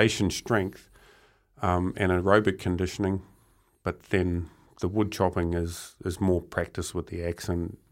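No technical faults can be heard in this speech clip.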